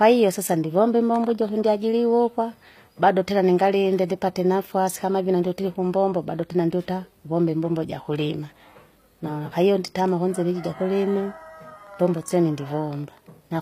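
The speech was likely squeezed through HE-AAC compression at a low bitrate, around 24 kbps, and spectral band replication rebuilds its treble throughout. That upper region is copied from lower bands rather than kept, so s sounds come out gritty and metallic, and nothing reaches above 15.5 kHz.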